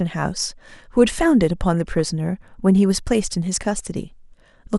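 Throughout, the speech sounds dull and gurgly, with upper bands dropping in and out: likely MP2 compression, at a low bitrate that fits about 80 kbps. From 1.74 to 2.09 s and again from 3.56 to 3.79 s, DAB burbling adds short blips of noise as residual bit errors corrupt samples in individual sub-bands.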